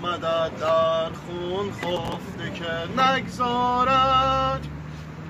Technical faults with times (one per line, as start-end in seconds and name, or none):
1.97-2.15 processor overload crackle